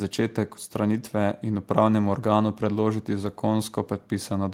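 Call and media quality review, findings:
Nothing to flag here; the speech came through without any audible trouble on the call or media path.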